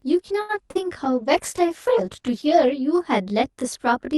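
Speech runs throughout with channel delay (comb filtering): one channel lags the other by roughly 20 ms, and the mono sum cancels at evenly spaced frequencies from about 30 Hz upward, giving a rough, slightly doubled sound. A short stall from a late packet at 0.41–0.51 s holds the sound for 76 ms while the empty jitter buffer waits, then resumes with nothing lost. A short concealed packet loss at 0.71–0.82 s replaces 40 ms of missing audio with an extrapolated continuation, heard as a brief smear before it blends back. A call bitrate drop from 1.04 to 2.82 s takes the encoder from 64 to 13 kbps, lowest for about 1.7 s, so the sound turns coarse and muffled until the bitrate recovers.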